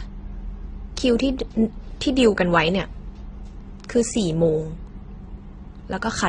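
Throughout the speech, nothing is present above 9.7 kHz, and grainy, smeared artefacts of two different kinds are heard layered together. This is likely transcoding between lossy codecs, consistent with low-bitrate MP3 re-encoded as Opus, the second encoder spending bits on the first one's damage.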